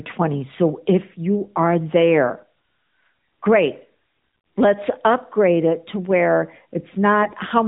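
Near the end, from 7.22 to 7.35 s, the speech turns briefly hoarse and gargly, a scratchy roughness over pitch and level that stay roughly in place. These are AMR bit errors: on a weak link, a few percent of the less protected bits in the AMR-NB frames arrived flipped while the checksum still passed, so pulse positions and fine pitch, gain and spectral values decoded wrongly. The roughly 120 ms burst fits about six 20 ms frames.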